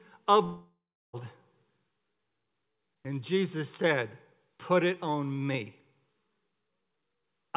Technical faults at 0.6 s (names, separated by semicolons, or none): long network dropout